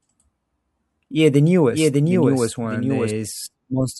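A doubled audio track runs from 1.71 to 3.11 s in this speech: a dry copy about 5 dB quieter trails roughly 0.7 s behind, starting and stopping abruptly, likely from a second, slower capture path.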